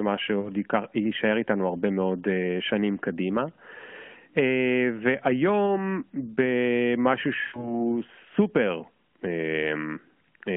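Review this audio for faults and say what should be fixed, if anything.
Radio errors corrupted speech frames, so lost AMR speech frames were concealed by repeating the last good pitch and spectral settings at falling gain. At 0.40–0.52 s and 5.67–5.70 s this gives a brief dip or warble. At 7.42–7.81 s a run of about six 20 ms frames smears into silence before the speech returns rough. Stronger channel protection or a more robust link mode would prevent it.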